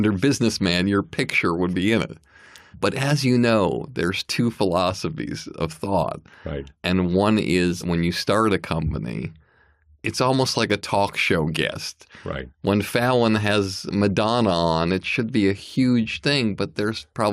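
No technical faults are audible in this speech recording.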